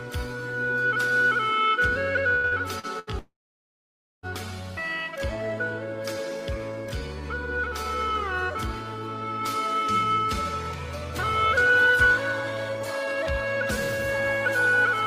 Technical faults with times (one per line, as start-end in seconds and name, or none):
2.35-3.10 repeated packet loss (robotic sound)
3.19-4.26 long network dropout